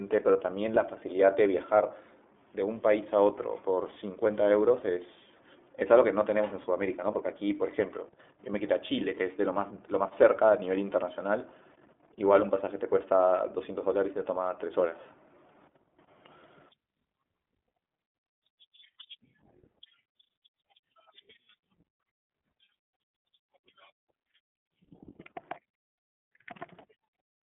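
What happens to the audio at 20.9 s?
At 20.9 s the speech carries the iLBC codec coloring heard across the whole clip. The sound sits in a narrow telephone band of roughly 200 Hz to 3.5 kHz, with nothing above 3.7 kHz, and has a plainly audible rough, synthetic grain. The grain comes from coding each 20 ms frame's excitation on its own, which fits the 15.2 kbps mode. A simple band-limit or a clean narrowband codec like G.711 would be dull but smooth.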